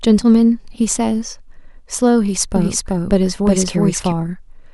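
From 2.56 to 4.12 s the speech is doubled: an equally loud copy trails by roughly 0.4 s, starting and stopping abruptly, with no decay, unlike an echo. Likely a second, slower capture path.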